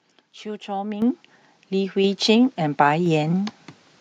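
Microphone volume stepped up at 1.02, 2.04 and 3.06 s. Automatic gain raised the input level in single steps of about 9, 4 and 2 dB, so voice and background jump louder together each time.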